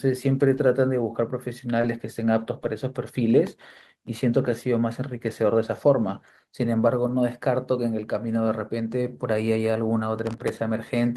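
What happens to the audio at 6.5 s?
Nothing goes wrong at 6.5 s; the speech continues intact through that moment.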